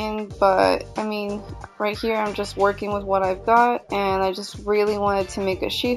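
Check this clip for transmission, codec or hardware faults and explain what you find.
There's one fault, and it runs the whole length: imaging from linear upsampling. The sound looks to have been taken up in rate by simple straight-line interpolation, which fits a 16 kHz source lifted to 44.1 kHz. That weak filter softens the top of the original band and leaves a mirrored copy of the spectrum sitting from 8 kHz up to 16 kHz, roughly 30 dB down. You hear it as a faint metallic shimmer riding on the brightest, hissiest moments.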